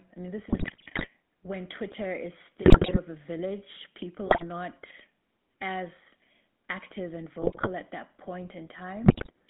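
Speech heard through the GSM full-rate codec for the whole clip. The band runs from 150 Hz to 3.6 kHz. The voice is plainly buzzy and gravelly, which fits the 13 kbps full-rate coder. GSM bit errors break up the voice at 0.48–1.08 s, 2.62–2.99 s, 4.26–4.44 s, 7.42–7.69 s and 9.04–9.30 s. Corrupted filter, pitch and gain values produce squawks, pops and gargling.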